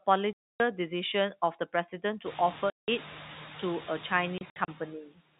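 Noise suppressor artifacts run through the whole clip. The suppressor pulls down the bands it treats as steady background, but only by about 2 dB, so the noise swells under the speech and sags between phrases. The effect is easiest to hear after the room noise rises by about 20 dB near 2.5 s, where it sits about 16 dB under the speech. Unlike a line dropout, nothing goes fully silent.

Packet loss filled with silence cuts the speech at 0.33–0.60 s (270 ms), at 2.70–2.88 s (180 ms), and in scattered short gaps across 4.38–4.68 s, the longest about 60 ms. Every gap is a multiple of 30 ms, which fits 30 ms packets. The receiver played dead silence in place of the missing audio, so background and speech vanish together and each hole has hard edges. That abrupt digital silence is what separates it from the suppressor's softer dips.

Speech cut by the noise suppressor occurs at 5.06–5.21 s. The suppressor mistook part of the speech for noise and turned it down with the background, by up to about 18 dB. 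The sound there seems swallowed and faint rather than removed. A trace of signal remains, unlike the empty, hard-edged holes from packet loss.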